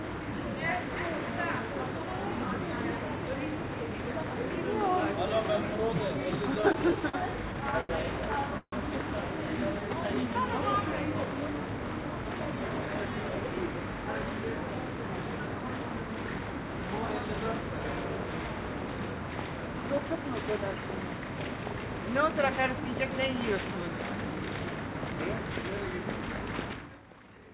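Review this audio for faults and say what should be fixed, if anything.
Repeated stalls (stutter) occur twice. From 6.55 to 7.15 s the sound halts six times, with the longest halt at 45 ms and 106 ms of filled-in sound in total. From 7.53 to 7.91 s it halts four times, the longest at 84 ms, with 116 ms filled. Each time, packets arrived later than playback needed them, the jitter buffer emptied, and the receiver continued the last sound until data resumed. No audio is lost, but the passage drags. Prevention: give the jitter buffer enough headroom for the network's actual arrival jitter.

A call audio freeze runs from 8.57 to 8.74 s. The sound is extended for 149 ms, and the last 60 ms of that is silent, so the filled-in sound dies away before playback resumes where it stopped. The likely cause is packets held up in transit that drained the buffer completely. Nothing is missing, but the freeze adds 149 ms of delay to everything after it. 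Prevention: reduce transport delay spikes, for example with traffic prioritisation or a steadier network route.

A jitter buffer slow-down follows from 9.88 to 10.41 s. The receiver added 74 ms by repeating small pieces of the signal, so this stretch plays at 87% speed while keeping its pitch. Sounds are audibly drawn out because the buffer was rebuilding its reserve. Prevention: stabilise packet arrival so the buffer does not need to refill right after a freeze.

A jitter buffer speed-up runs from 12.24 to 13.81 s. Short segments totalling roughly a fifth of a second were cut out, so playback runs at 113% speed with unchanged pitch. That is well past the point where audio sounds hurried. The buffer was shedding the excess delay it had built up earlier. Prevention: limit delay build-up so the buffer needs less catch-up.

Nothing is audible above 4 kHz, which fits a narrowband G.711-type codec on the call path.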